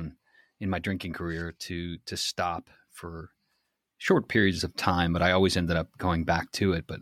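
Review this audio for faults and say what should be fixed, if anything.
At 4.08 s the speech steps up by about 6 dB and stays there to the end. This is a sudden gain jump. The voice and the background noise rise together in one instant, with no fade. That shared, instant step points to a digital level change rather than anything at the microphone. The likely cause is a gain setting or bit shift applied between two samples without a ramp. To prevent it, smooth every gain change over a few milliseconds.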